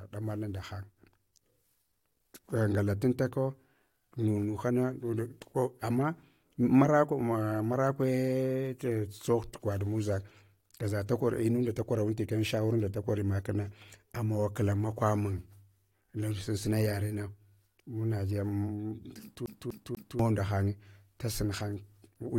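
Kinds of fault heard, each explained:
CD stuck on one turn: A scratch keeps knocking the laser back one track at the same point on each rotation, so playback cannot advance past it. In this speech clip, from 19.46 to 20.19 s, a slice of about 0.24 s of audio plays three times in a row, each pass cut off by a brief mute at the jump. It forms the quick, evenly spaced stutter of a skipping disc, which breaks free just before "nda hanye".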